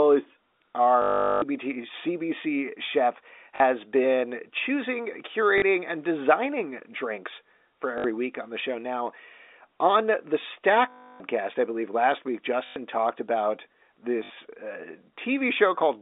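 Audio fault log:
1.02–1.42, 3.56–3.60, 5.58–5.62, 7.98–8.04, 10.90–11.20, 12.66–12.76 and 14.24–14.30 s: packet loss with last packet repeated. Lost audio is filled by replaying the previous chunk, giving a robotic stutter. The longest runs buzz near 50 Hz, which fits 20 ms packets.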